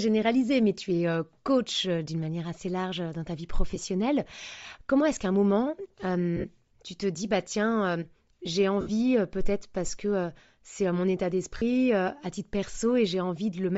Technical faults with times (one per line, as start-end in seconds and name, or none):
0.00-13.77 Bluetooth LC3 compression
3.70-3.77 lost LE Audio frames
6.36-6.45 lost LE Audio frames
8.81-8.90 lost LE Audio frames
11.57-11.62 lost LE Audio frames